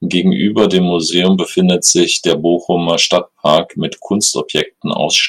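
The speech in this clip was driven about 5 dB harder than a stage in the chain could pass, and the result is hard clipping throughout. Each peak that overshoots the ceiling is sliced flat, which happens on well under one percent of samples, so the damage stays confined to the loudest moments. Those squared-off tops add harmonics high in the spectrum, heard as brief crackle and edge on the strongest syllables rather than a continuous fuzz.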